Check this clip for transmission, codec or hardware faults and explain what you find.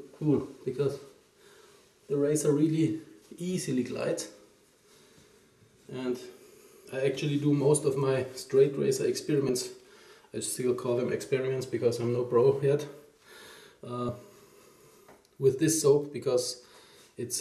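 Compressed frames are skipped at four points: 1.99, 6.87, 9.49 and 14.08 s. Each time the audio jumps ahead, by roughly 50 ms at most points and about 30 ms at 6.87 s. That fits whole 26.1 ms frames going unplayed. Overlapping neighbours smear each join into a brief blip, not a click.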